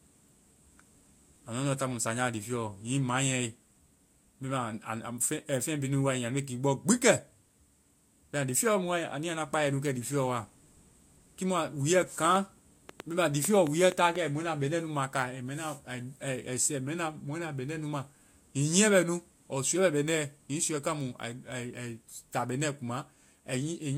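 A speech recording with a train of clicks from 12.25 to 14.17 s. About ten similar clicks arrive unevenly, around 4.2 per second, peaking roughly 10 dB above the speech. The likely cause is interference from nearby equipment, or a faulty connection or power supply.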